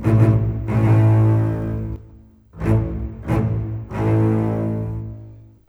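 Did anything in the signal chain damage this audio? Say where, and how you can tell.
Yes. From the start of the clip to 1.96 s there is a doubled audio track: a second, full-band copy of the sound runs roughly 150 ms behind, at about the same level as the original, with no decay or room colour, then stops abruptly at 1.96 s. The fixed lag and clean repeat point to a routing or buffer stage. The likely cause is the signal being captured twice, once through a slower path.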